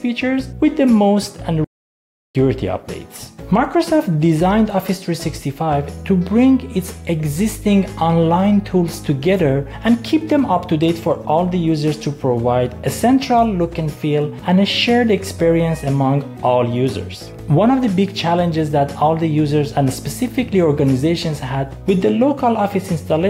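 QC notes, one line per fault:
1.64–2.35 s, playback stall: the sound cuts out abruptly mid-flow and stays silent for about 0.70 s before resuming. The output likely ran dry because the player's buffer emptied or its thread was blocked, so nothing reached the device until it recovered.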